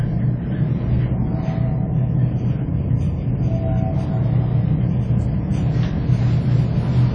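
Throughout, likely WMA compression at a low bitrate around 32 kbps leaves nothing above 9.8 kHz and a ringing, washy smear with hiss breathing alongside the sound.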